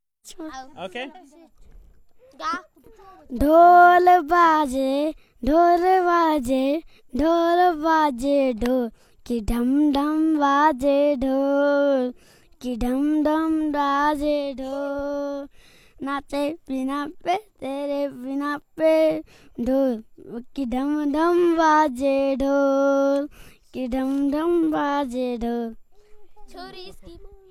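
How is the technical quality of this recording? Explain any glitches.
The technical quality of this recording is good, with no glitches to explain.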